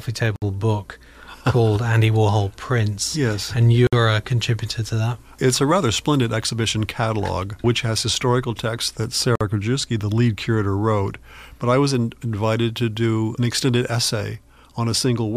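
At 0.36, 3.87 and 9.35 s the sound drops out for about 61, 56 and 52 ms, a gap at a join of encoded pieces. Separately encoded chunks were butted together untrimmed, so encoder start delay and final-frame padding leave short silences with smeared edges before the sound picks up where it stopped.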